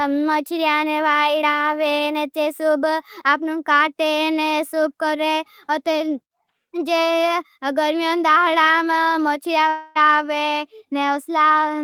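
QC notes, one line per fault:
9.69–9.97 s, long network dropout: likely a stall in arriving packets left about 0.26 s missing, concealed by a fading buzzy continuation before speech resumes.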